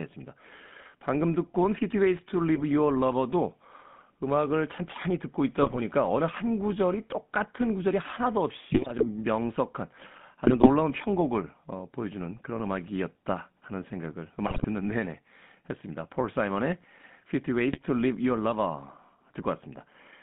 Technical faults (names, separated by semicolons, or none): GSM full-rate codec; GSM bit errors